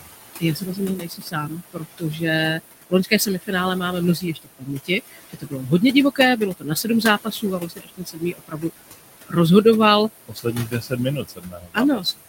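Right from the start there are noise suppressor artifacts: the room noise, sitting about 11 dB under the speech, gets pulled down by about 19 dB in the gaps, then swells back under each phrase. On top of that, there's speech cut by the noise suppressor at 0.01–2.22 s, 2.58–3.83 s, 4.15–5.65 s, 6.15–8.93 s and 10.28–12.28 s, where it mistook quieter bits for noise and ducked them by up to about 21 dB. Roughly a second goes missing in several spans, less in the second, so parts of the speech sound swallowed.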